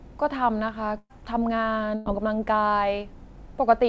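At 0.98 s and again at 1.95 s, the speech smears into a held, fading sound and then jumps ahead, a burst of packet loss. Lost packets were concealed by stretching the last sound, about 0.12 s and 0.1 s each, with a brief silence closing the first.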